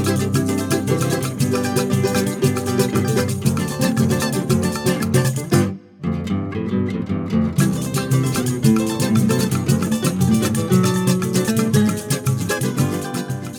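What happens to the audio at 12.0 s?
Nothing goes wrong at 12.0 s: the audio plays through that moment intact, with no dropout, click, distortion or other fault.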